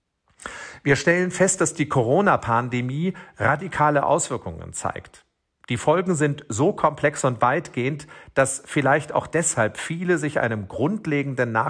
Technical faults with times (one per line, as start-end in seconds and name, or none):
none